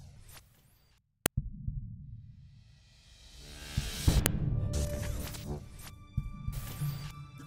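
At 1.26 s and again at 4.26 s, a sharp, loud click snaps through the sound. This is a file header played as audio. Pieces about 3 s long were joined with their headers intact. Those header bytes play as a brief burst, unrelated to the signal.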